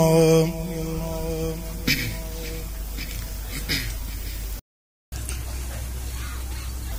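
At 4.59 s a playback stall silences the audio for 0.53 s, until 5.12 s, likely because the player ran out of data; the waveform drops to a flat line. From 5.12 to 6.92 s, catch-up at higher speed plays at 1.25 times normal speed, pitch raised about four semitones; spectrogram harmonics shift upward.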